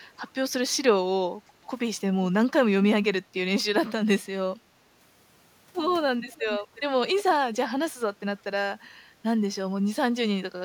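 Around 6.35 to 6.42 s, 6.75 to 6.81 s and 7.16 to 7.23 s you get short echo leak scraps: a faint copy of the speech about 357 ms late and roughly 20 to 25 dB down. Likely a loudspeaker end whose echo canceller let some through.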